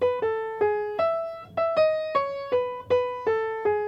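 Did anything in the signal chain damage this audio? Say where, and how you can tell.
Yes. The damage happens at the sample-format conversion stage. For the whole clip the audio plays at twice the correct speed and sits a full octave, 12 semitones, too high. This is audio read two samples at a time (double speed). The reader took each pair of samples as a single frame, as if the data were stereo or twice as wide. That halved the duration.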